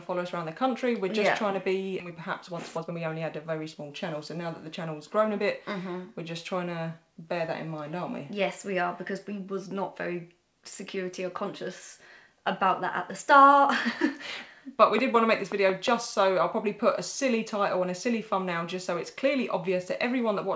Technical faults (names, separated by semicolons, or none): skip ahead; jitter buffer speed-up; train of clicks